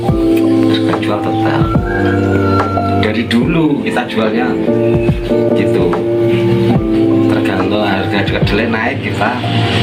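Gain pumping runs from start to finish, likely from the input gain being set far too high and a fast limiter or compressor clamping down on each loud sound. The level swings by around 15 dB as that control acts. The loud and quiet parts sit unnaturally close together, so the whole sound comes across as squashed.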